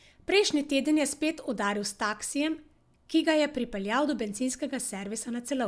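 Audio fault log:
No technical faults can be heard anywhere in this speech recording.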